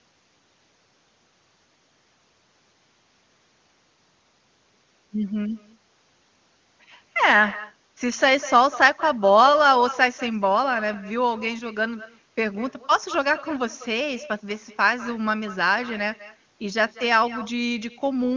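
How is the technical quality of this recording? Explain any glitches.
The recording is marred by one fault that runs through the whole clip of speech: echo with no canceller.

Echo with no canceller, throughout: the far end's loudspeaker feeds its microphone and nothing strips that out, so each phrase returns about a fifth of a second later, roughly 16 dB quieter and thin.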